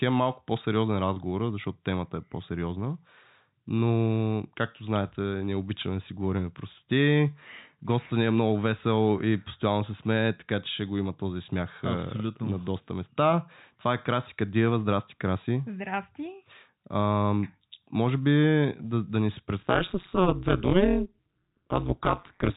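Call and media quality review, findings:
Packet loss with pitch repetition, 1.14 s: brief held, buzzy blip in the speech. One lost packet of 20 ms, which fits a 20 ms frame. Concealment repeated the last pitch period to fill the hole. Too short to fade out, so you get that slightly stuck note instead of a dropout. Jitter buffer or network path is the place to look. Nothing else like it in the clip.

Overlap-add ripple, 19.62 s to the end at 22.6 s: metallic buzz with extra tones around each note over the speech. The framing and re-synthesis stage's windows don't overlap to constant gain, so level swings once per frame, roughly 200 times a second, and the swing is deep, about 60 dB. Check window and hop settings in whatever processing block kicks in near the end. The G.711 mu-law leg underneath is fine, just the usual 4 kHz ceiling.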